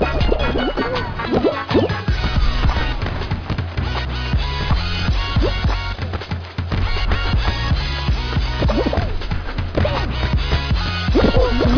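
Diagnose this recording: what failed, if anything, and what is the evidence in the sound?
Nothing in this recording points to a failure at any stage, so there's no fault to diagnose here.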